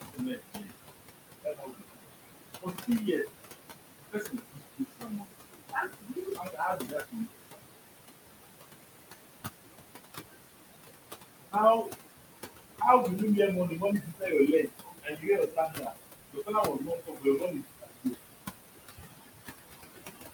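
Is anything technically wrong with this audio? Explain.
Yes, there are two related problems, both from a noise suppressor working too hard on speech that sits only about 7 dB above the room noise. First, noise suppressor artifacts run through the whole clip. The suppressor pulls down every band it judges to be steady noise, by about 20 dB, so the room noise drops away in gaps and swells back under the speech.

Second, there's speech cut by the noise suppressor in six stretches: 0.01–0.7 s, 1.44–2.05 s, 2.61–3.28 s, 3.98–7.57 s, 11.5–11.96 s and 12.8–18.16 s. It mistakes quieter parts of the speech for noise and ducks them by about 20 to 22 dB along with the background. Soft consonants and word endings sound swallowed or faint. The longest runs, around 4 to 7.6 s and 12.8 to 18.2 s, lose a few seconds of material in total.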